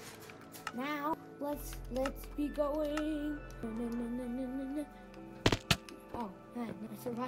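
Damaged data in a compressed stream appears at 1.14–1.17 s, 3.63–3.66 s and 6.86–6.90 s. Each time, corrupted bytes make the decoder misread frames and lose sync until it finds the next valid header, producing a brief chirp or blip of roughly 30 ms.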